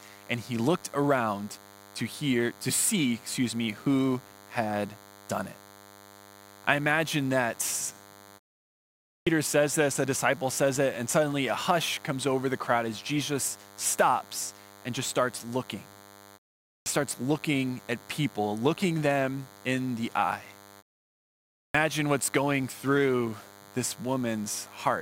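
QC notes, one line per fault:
Throughout: DECT cordless phone buzz. A thin, steady buzz sits under the speech from start to end. It repeats 100 times a second and carries many harmonics, so it sounds edgy rather than like a low hum. A nearby DECT handset or base sends a radio burst every 10 ms. The audio circuit rectifies each burst into a click. It stays well under the speech, roughly 25 dB down.
9.14 s, 16.73 s, 21.6 s: clipped start after a pause. Speech resumes abruptly at each of these points, with its first sounds missing. About 126 ms is lost at 9.14 s, 130 ms at 16.73 s and 145 ms at 21.6 s. Each comes after a pause of 0.83 s, 0.43 s and 0.86 s. The output device sleeps during the silence. It then needs time to wake and lock again, so the onset is swallowed.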